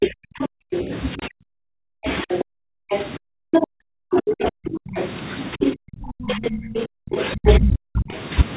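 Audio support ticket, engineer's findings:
Speech suppressed in double talk: 0.0–4.95 s and 5.55–8.11 s, near-end speech dipping deep, around 40 dB at worst, over roughly 4 s and then 2 s. Likely cause: the echo canceller's suppressor, unable to split talker from loudspeaker echo, attenuating both.

Other side's voice leaking through: 0.02–0.79 s, 2.29–5.75 s, 6.31–7.58 s, a second voice roughly level with the talker, last stretch a few dB louder. Likely residual echo the canceller failed to remove, heard within the narrowband 4 kHz call path typical of G.711.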